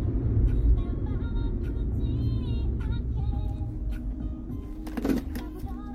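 At 5.62 s, near the very end, compressed frames are skipped: a short run of encoded frames never reaches the output, either missing or rejected by the decoder as corrupt, so the sound jumps ahead by something like 70 ms. On a spectrogram this shows as a narrow vertical seam where the texture abruptly changes, and the waveform shows a discontinuity in its envelope.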